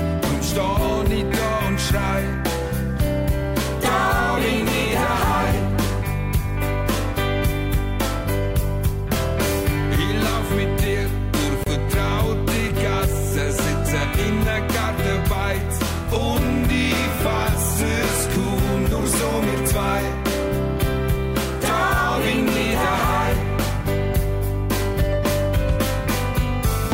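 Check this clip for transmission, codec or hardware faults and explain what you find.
There is one fault, a short dropout where two separately encoded pieces meet.

Gap at a join of encoded pieces, 11.64 to 11.66 s: untrimmed encoder delay and end padding leave about 29 ms of silence with smeared edges, then the sound resumes where it stopped.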